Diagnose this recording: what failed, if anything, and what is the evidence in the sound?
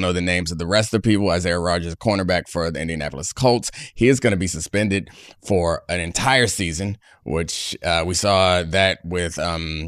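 Nothing in this speech recording points to a failure at any stage of the chain. There are no dropouts, discontinuities or other events in the sound that would mark a point of breakdown.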